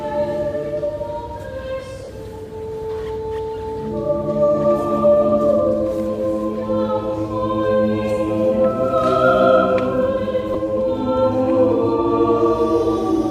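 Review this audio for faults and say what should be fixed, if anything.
There are two short dropouts from lost LE Audio frames, at 2.04–2.08 s (about 40 ms, which fits four 10 ms frames going missing) and a brief one at 10.54 s (about 10 ms, likely a single frame). When frames drop, the LC3 decoder covers the hole by replaying the last spectrum with randomised signs, so anything tonal briefly turns into a noisy smear. The light codec compression on the rest of the clip is a separate matter. To prevent the dropouts, improve the Bluetooth link margin (distance, interference, retransmission settings) so fewer frames get lost.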